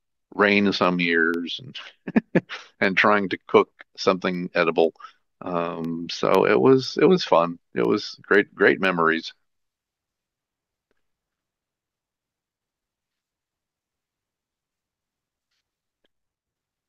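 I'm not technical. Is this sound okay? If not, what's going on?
No, not quite. From about 0.35 s to 16.35 s there's a tick every half second, about thirty in all, heard only while someone is speaking. That's periodic USB or driver dropouts: something in the background keeps briefly blocking the audio connection on a fixed schedule, and each time a tiny sliver of the speech, far shorter than a millisecond, drops out to silence. That little gap is what you hear as the click.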